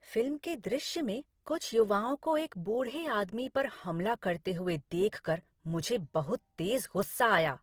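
Throughout the speech, grainy, rough, noise-filled tone with content reaching about 20.3 kHz is likely Opus compression near 16 kbps, filling starved bands rather than leaving MP3's swirling holes.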